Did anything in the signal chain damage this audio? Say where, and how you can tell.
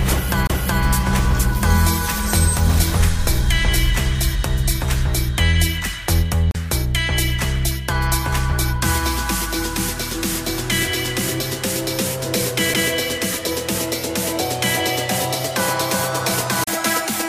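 Yes, at playback: three CD skips, at 0.47–0.50 s, 6.51–6.55 s and 16.64–16.67 s. The laser jumps tracks, giving a tick, a mute of a few tens of milliseconds and a resume elsewhere. The waveform shows a short flat gap; the spectrogram, a vertical break.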